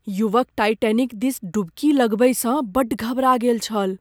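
No technical faults can be heard anywhere in the speech. Nothing in the recording needs a timestamp or a fault description.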